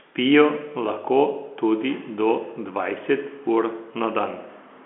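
Nothing stood out on listening to this speech, which comes across as ordinary G.711 telephone audio confined to the narrow line band.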